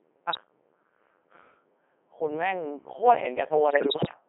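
From start to finish, the speech has passed through a Codec 2 vocoder at a rate that sounds like about 3.2 kbit/s, confined to a 250 Hz to 3.4 kHz band. Only pitch, voicing, energy and spectral envelope survive, and the decoder rebuilds the voice from sine waves. The result is heavily robotic and buzzy.

At 0.33 to 0.37 s, bit errors on digital voice radio corrupt what sounds like a single vocoder frame, with something like one bit in ten flipped. The decoder misreads that frame's parameters, producing a brief bleep-like jump in pitch and tone. From 3.68 to 4.14 s, a longer run of errors, around one bit in twenty and spanning what points to roughly twenty frames, leaves the synthetic voice warbling and jumping in pitch, level and colour into robotic gibberish.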